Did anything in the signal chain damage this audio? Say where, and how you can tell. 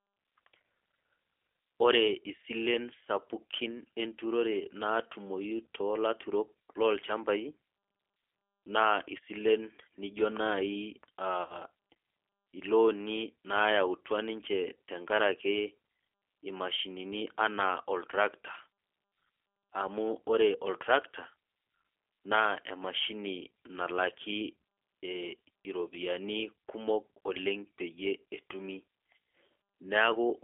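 Yes. Throughout the clip the speech has a rough, slightly synthetic buzz, with a band stopping near 300 Hz at the bottom and 3.4 kHz at the top. That is the G.729 codec, here the G.729A variant, at 8 kbit/s. At the codec stage it discards the waveform and rebuilds each 10 ms frame from a vocal-tract filter, a pitch predictor and a handful of pulses, so detail is replaced by an approximation you can plainly hear.

At the network stage, from 11.42 s to 11.62 s, the speech smears into a fading buzzy tone or coloured noise and then stays weak and distorted for a while after it resumes. This is VoIP packet loss concealed by the speech codec. About 80 ms of audio went missing, which fits four 20 ms packets. The decoder filled the gap by repeating its last pitch and filter with falling gain. Because each frame builds on the previous one, recovery lagged past the loss itself.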